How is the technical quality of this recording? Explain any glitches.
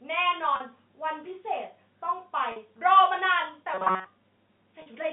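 The speech has two kinds of glitch: three brief dropouts bridged by pitch repetition, and one stretch of robotic buzz, heard over a telephone-band line running roughly 150 Hz to 3.6 kHz.

Packet loss with pitch repetition occurs at 0.56 s, 2.52 s and 4.82 s, each gap about 40 ms long, which fits two lost 20 ms packets. The receiver fills each hole by looping the last pitch period, so the sound briefly holds on a slightly buzzy, frozen tone before normal speech resumes.

Robotic sound from repeated short buffers runs from 3.74 to 4.06 s. Fresh audio is likely arriving too seldom, so the playback loops a tiny slice, which fits a buffer of roughly 5.3 ms, and skips most of the real signal. That forces a rigid, metallic 188 Hz buzz that only loosely tracks the speech.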